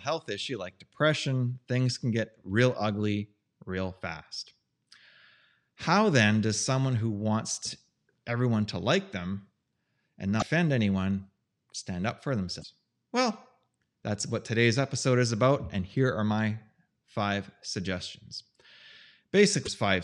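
Damaged data in a compressed stream occurs three times, at 10.39 to 10.43 s, just before "anyone stand up for", at 12.61 to 12.65 s, just after that phrase, and at 19.63 to 19.68 s. Corrupted bytes break frame decoding, so the decoder loses sync while hunting for the next valid header.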